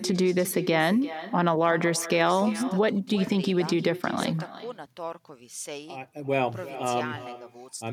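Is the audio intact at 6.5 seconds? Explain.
No. At 6.5 s, as throughout, echo with no canceller returns the speech about 14 dB quieter roughly 0.4 s later, showing as faint, smeared repeated waveform bursts.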